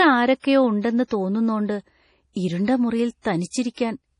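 Throughout, the speech sounds watery and swirly, with nothing above 10.4 kHz and the s sounds chirping metallically. This is likely heavy MP3 compression, consistent with a bitrate near 32 kbps: the encoder cut the treble and dropped weak frequency lines that flicker between frames.

Pre-echo appears at 0.40 to 0.44 s, 1.07 to 1.11 s, 3.22 to 3.25 s and 3.74 to 3.77 s, where a short hiss of 35 to 42 ms comes before each attack and the onset softens. The codec spread quantisation noise across its whole block, so noise meant for the loud attack leaked into the quiet moment before it.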